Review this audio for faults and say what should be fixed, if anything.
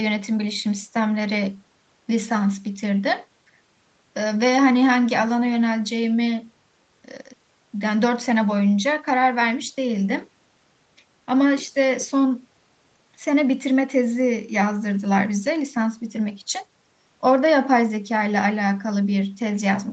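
Nothing stood out on listening, so there is nothing here to fix.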